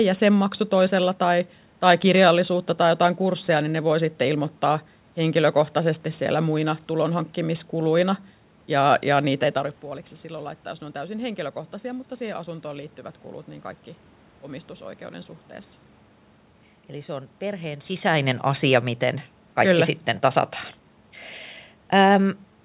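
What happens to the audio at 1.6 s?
Nothing goes wrong at 1.6 s: the audio carries on intact through that moment, with no dropout, glitch or distortion to be heard.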